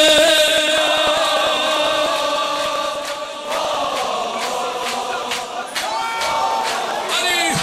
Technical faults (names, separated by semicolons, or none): MP2 compression; periodic USB or driver dropouts